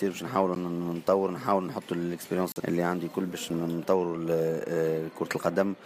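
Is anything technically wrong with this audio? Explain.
Yes. There are three blocks of digital silence: at 0.55 s (10 ms), from 2.52 to 2.56 s (40 ms), and at 3.50 s (4.4 ms). Samples were replaced with zeros, which points to output buffers not being filled in time. The sound cuts to nothing without a fade. This gives ticks at 0.55 s and 3.50 s and a short hole at 2.52 s.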